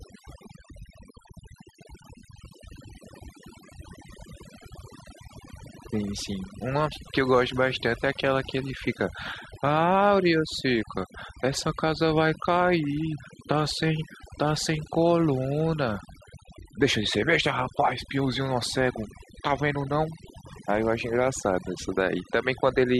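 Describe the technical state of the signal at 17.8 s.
At 17.8 s you're hearing overdone noise removal, and it's there for the whole clip, not just at that moment. The noise reducer was pushed too hard, so any frequency band sitting near its noise estimate gets pulled way down or shut off, and the quieter parts of the voice get taken out along with the noise. The background drops and breaks up into little twinkling, warbling specks.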